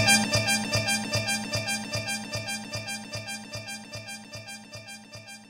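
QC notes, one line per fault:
Nothing to flag here; I listened all the way and didn't catch a single problem.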